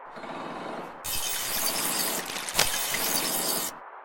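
A worn cable, connector or control was likely being moved, its contact resistance jumping rapidly and injecting cable scratch noise from 2.17 to 3.22 s. Dense, uneven bursts of scratching and rustling sit just below the level of the sound itself throughout that second.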